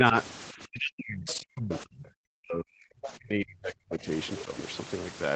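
Speech suppressed in double talk shapes most of this speech recording, with brief level dips at 0.0–0.14 s and 4.45–4.51 s of about 5 dB. The main stretch runs from 0.53 to 4.08 s, where roughly three seconds of the talker are pulled down, at worst by about 40 dB. The likely cause is an echo canceller that heard loudspeaker playback at the same time as the local talker, could not separate the two, and attenuated everything together.

The other side's voice leaking through shows up as short scraps at 1.26–1.34 s, 1.70–1.80 s, 1.99–2.04 s, 3.02–3.10 s and 4.36–4.44 s. These sit about 15 to 25 dB below the main speech. This is likely far-end audio from the device's loudspeaker that the echo canceller failed to remove from the microphone signal, so fragments of the remote talker stay in the recording. The audio is band-limited to 8 kHz by the call path.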